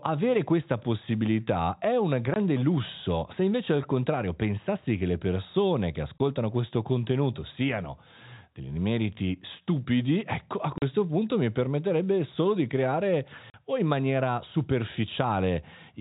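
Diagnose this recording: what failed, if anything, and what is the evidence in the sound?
Packet loss filled with silence at 2.34, 6.18, 10.78 and 13.5 s: 20 and 40 ms network dropouts, fitting one or two missing 20 ms packets.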